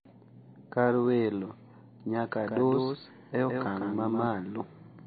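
A speech recording with two faults. Throughout, the sound is dull and watery, with nothing above 4.6 kHz and plainly audible swirling on the weak detail. MP3 compression is the likely cause, and the damage fits a low bitrate of around 24 kbps. From 2.43 to 4.27 s, a second copy of the speech trails about 150 ms behind, roughly 5 dB quieter. It has no room tail and starts and stops abruptly. This is a doubled audio track, likely from a second out-of-step capture path.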